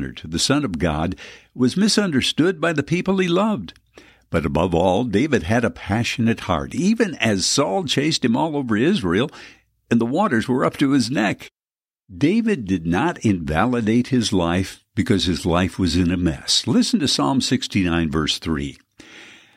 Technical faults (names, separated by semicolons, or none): none